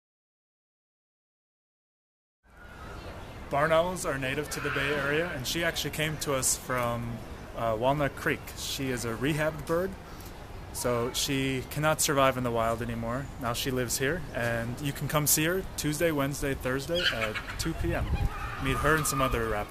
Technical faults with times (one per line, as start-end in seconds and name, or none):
none